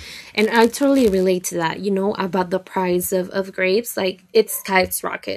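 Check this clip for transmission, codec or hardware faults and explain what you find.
One transmission fault is present in this speech. Block size mismatch (padded), 0.37 to 1.24 s: one stage delivers shorter blocks than the next expects, and zeros fill each remainder. Those tiny gaps repeat as a buzz near 91.5 Hz, and the speech runs very slightly slow, about 0.996 times normal speed, with its timbre intact.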